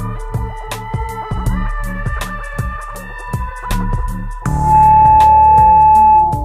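At 4.43 s a loudspeaker feedback squeal begins and continues until the clip ends. A microphone is picking up the loudspeaker it feeds, and at 864 Hz the gain around that loop exceeds one, so the tone reinforces itself on each pass. It swells over roughly a third of a second into a steady squeal that sits about 15 dB above the rest of the sound and is still sounding when the audio stops.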